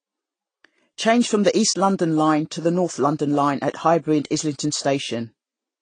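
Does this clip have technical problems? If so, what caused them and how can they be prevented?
Yes. Throughout, nothing reaches above 9.4 kHz and two sets of smeary artefacts stack up, likely from transcoding between lossy codecs, an MP3 of around 48 kbit/s then re-encoded to low-rate Vorbis. Keep a lossless master and encode only once.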